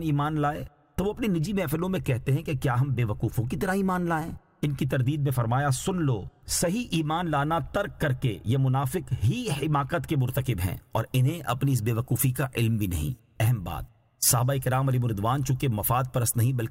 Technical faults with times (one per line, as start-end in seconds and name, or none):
0.00-10.18 de-emphasis applied wrongly